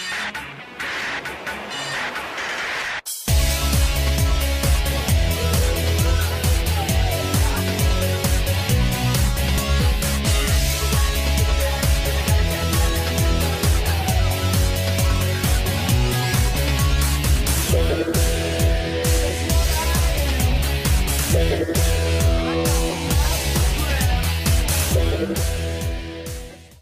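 No technical faults can be heard anywhere in the audio.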